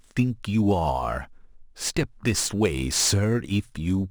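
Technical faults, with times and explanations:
Throughout, crude rate conversion: louder and brighter syllables carry a gritty, inharmonic fizz about 20 dB below the speech. This fits a 48 kHz to 44.1 kHz change made by dropping or repeating nearest samples. Unlike steady hiss, the grit rises and falls with the speech.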